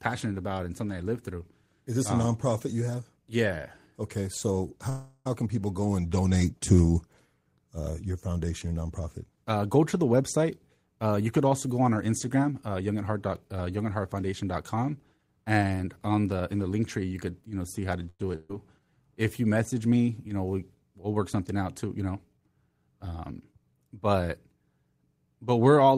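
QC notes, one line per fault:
4.89–5.27 s, call audio freeze: just before "can people go and", the sound stretches into a held, fading buzz or hiss for about 0.36 s, then carries on with nothing lost. Packets were likely held up, so the receiver filled the wait and the speech resumed later.
12.08–12.91 s, jitter buffer speed-up: after "also go on our", the speech hurries at an unchanged pitch, running at 108% for about 0.8 s. The buffer held too much audio, so short pitch-period pieces, roughly 70 ms in all, were trimmed out to cut delay.
18.09–18.21 s, call audio freeze: after "know see how to", the sound hangs as a brief fading buzz or hiss for about 0.1 s, ending in a short silence of 20 ms, then continues intact. A likely stall in arriving packets emptied the buffer and pushed the rest later.
18.35–18.51 s, burst of packet loss: the last sound is held and dies away for about 0.14 s, then the speech jumps ahead with 200 ms skipped. 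Consecutive packets were lost or arrived too late, so that stretch was concealed and never recovered.
18.80–18.97 s, jitter buffer slow-down: the speech drags at the same pitch, playing at 83% and adding 39 ms. With the buffer running low or its target delay just raised, single pitch periods were repeated to rebuild a reserve.
22.40–23.72 s, jitter buffer speed-up: the speech runs slightly rushed at unchanged pitch, at 105% for about 1.3 s. An overfull buffer was trimmed by dropping small pitch-period pieces, roughly 70 ms altogether, to bring the delay back down.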